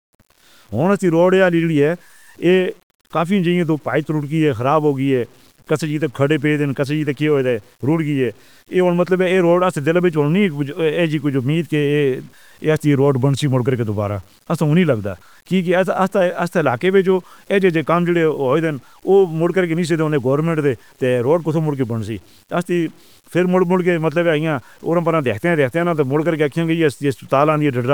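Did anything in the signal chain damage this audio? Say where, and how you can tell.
Yes. Low bit depth without dither runs through the whole speech clip. The quiet stretches and syllable tails turn gritty and sputter, and the grainy distortion moves with the speech rather than sitting underneath it as steady hiss, roughly 35 dB below the signal. The stage is sample-format conversion: the likely cause is truncation to about 8 bits with no dither, so the rounding error stays correlated with the waveform and the quietest detail collapses onto a few coarse steps.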